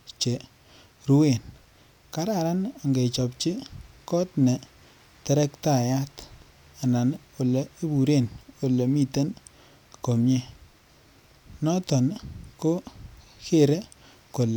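No technical faults can be heard anywhere in this speech recording. Nothing in it needs a timestamp or a repair.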